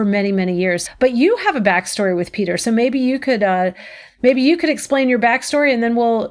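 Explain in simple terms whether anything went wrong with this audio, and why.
Nothing went wrong with the recording: the speech signal holds steady all the way through, with no audible technical faults at any point.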